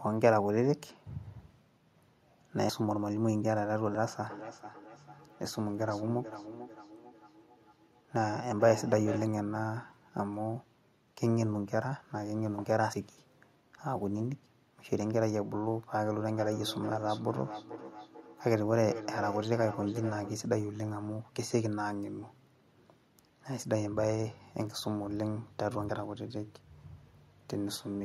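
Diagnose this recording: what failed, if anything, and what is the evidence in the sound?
Driver or buffer stage: jumps at 2.69, 3.95, 12.93 and 25.89 s where the speech jumps ahead by roughly 50 to 70 ms. This is likely a dropped buffer (overrun), with samples overwritten before they were read.

Call processing: feedback echo between two devices from 4.3 to 9.28 s and 16.19 to 20.39 s. Speech returns about every 400 ms, thinning each pass and peaking about 11 dB below the direct speech. A second device is replaying the call into the microphone.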